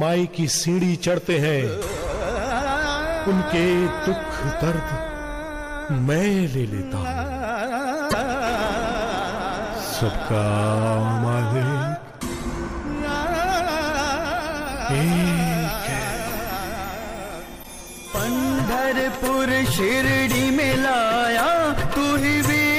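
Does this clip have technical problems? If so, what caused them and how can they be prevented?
Yes. Damaged data in the compressed stream causes two brief glitches, at 8.09 to 8.14 s and 17.60 to 17.65 s. Corrupted bytes make the decoder misread frames, lose sync and hunt for the next frame header. Verify files with checksums and use reliable, error-checked transfer.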